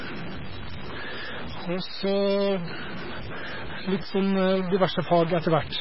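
From start to finish the speech carries a stuck bit, likely from a broken data line or converter in which one bit stays fixed at 0 or 1. Roughly half the sample values are pushed off by that bit's weight, in a pattern that follows the waveform, so the distortion rides on the speech itself. The bit also flips with the sign of small values, so pauses fill with noise instead of going quiet. On a waveform the gaps show a noise floor in place of flat silence, and a spectrogram shows broadband speckle behind the speech and through the pauses.

Across the whole clip there is also heavy MP3 compression, likely at a very low bitrate, around 16 kbps judging by the damage. With so few bits, the encoder drops weaker frequency components, which switch on and off from frame to frame, giving a watery, swirly texture. Attacks are smeared, and the top end stops abruptly, with nothing above 5.5 kHz. On a spectrogram this appears as a hard horizontal ceiling at 5.5 kHz, with patchy, flickering islands of energy below it.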